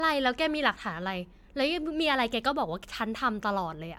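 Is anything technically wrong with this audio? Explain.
Yes. Generation loss runs through the whole speech clip. The sound is more swirly, smeared and hollow than a single MP3 pass at roughly 140 kbit/s should give, with blurred consonant attacks and content reaching only to about 20 kHz. The likely cause is repeated MP3 decoding and re-encoding, around seven times. Each pass quantises again on a shifted frame grid, so noise and spectral gaps compound rather than staying fixed.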